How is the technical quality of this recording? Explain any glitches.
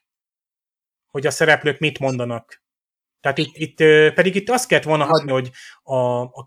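The recording is marred by three short corrupt-frame glitches in the speech. The corrupt frame decoded fault hits at 2.08–2.13 s, 3.37–3.61 s and 5.05–5.32 s. Damaged bits in the compressed stream were decoded anyway, so wrong gains and misread codes push energy into the wrong frequencies. The first is a brief blip around one frame long, peaking near about -20 dBFS. The later two sound like several frames in a row and come through as loud chirpy noise bursts at about -5 dBFS.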